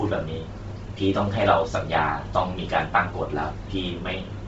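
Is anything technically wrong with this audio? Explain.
Yes. Throughout the speech there is heavy codec damage, most likely from Bluetooth LC3 compression. Nothing is present above about 7.7 kHz, and the upper band that remains sounds breathy and grainy. That texture fits a low bitrate near 24 kbps, where the codec zeroes much of the high spectrum and fills it with noise. A simple low-pass filter would sound dull and clean. This sound instead has a noisy, hissy edge, which fits that noise filling, applied in short transform frames around 7.5 ms.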